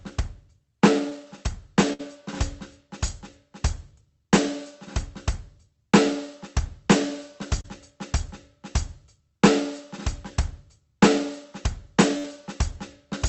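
At 1.09 to 1.13 s the music has a short concealed packet loss. About 20 ms never reached the decoder, and the receiver extended the preceding sound before blending back, leaving a brief smear. On a spectrogram the harmonics stretch briefly and slightly blur, with no gap in the waveform.

From 1.93 to 2.01 s a burst of packet loss removes 60 ms. The concealment holds the last sound and fades it in level, then the music resumes further along. The waveform shows a decaying, repetitive stretch, and the spectrogram shows frozen, fading bands before a jump.

At 7.61 to 7.66 s a second short concealed loss, about 40 ms, produces a longer wobble of the same kind.

From 12.18 to 12.26 s another 60 ms burst repeats the fading held sound and skip.

Throughout, the spectrogram is empty above 8 kHz, which fits the Opus call path at about 24 kbps.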